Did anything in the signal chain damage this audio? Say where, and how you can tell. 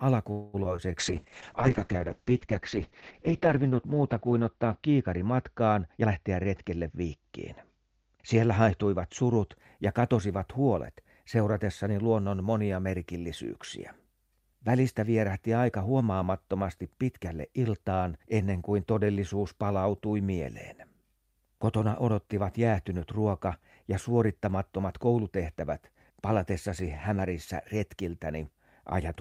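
Yes. From 0.31 to 0.56 s the sound stops moving forward and the last fragment is drawn out into a fading buzz for about 0.22 s, then resumes where it left off with nothing skipped. This is likely a call audio freeze at the network stage: late packets emptied the jitter buffer and the receiver extended the audio until they arrived.

Short concealed packet loss shows up twice in the decoder, at 0.64 to 0.67 s and 0.77 to 0.93 s. Each time about 20 ms of audio never reached the decoder in time, and the gap was filled by continuing the preceding sound before crossfading back. Both events are heard as brief smears, and the second one stretches the timing slightly.

A call bitrate drop runs from 1.00 to 9.63 s and ends just before "ja katosivat huolet seuratessani". The encoder fell from 48 kbps to 7 kbps and spent about 2.25 s at the lowest rate. Audio bandwidth shrinks from 20 kHz to 8 kHz, so the speech turns muffled and coarse, with a watery Opus texture.

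A jitter buffer speed-up appears between 5.98 and 7.19 s, where the speech runs at about 118% speed with its pitch unchanged. The receiver cut pitch-period-length pieces in quick succession to drain excess buffered audio, removing around a fifth of a second in total.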